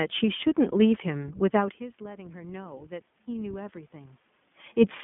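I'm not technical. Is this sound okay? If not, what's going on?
No, not quite. The whole clip has gone through the iLBC codec, a phone-call style voice squeezer. It chops the speech into 20 ms slices and codes each one separately, and it keeps only roughly 150 Hz to 3.5 kHz, so everything sounds thin and boxy. The damage is easy to hear as a slightly rough, synthetic edge. The background room noise and the volume shift near 1.5 s, where the talker seems to move, are just part of the recording.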